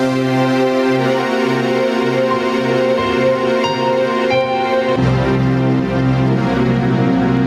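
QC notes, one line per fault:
Throughout, gain pumping: the gain is pulled down under each loud sound and recovers after, a swing of around 10 dB, so the level seems to breathe in and out. The likely cause is input gain set far too high with a fast limiter clamping every peak. On the waveform, peaks sit flattened at a near-constant ceiling.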